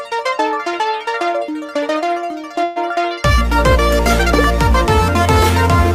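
At 2.63 s, packets were likely held up and the jitter buffer ran empty, producing a call audio freeze: about 125 ms of fading buzz fills the hole, then the sound resumes, running 125 ms later. At 4.44 s, a block of digital silence of just 0.31 ms, with samples dropped to zero without a fade, is heard as a sharp tick.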